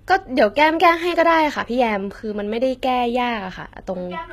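A speech clip with HE-AAC compression damage throughout, plainly audible: s sounds come out gritty and metallic, and the treble sounds bright but artificial, which fits a bitrate around 20 kbps. The likely cause is spectral band replication, where upper bands are copied from lower ones, so harmonics fail to line up. On a spectrogram the top band looks smeared and blocky, with patched-looking texture, and nothing above 14.9 kHz.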